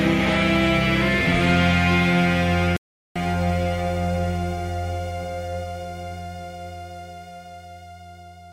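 At 2.77 s the music cuts out for about 390 ms, a playback stall, likely from the player running dry; the waveform flatlines until 3.16 s, leaving a blank spectrogram gap.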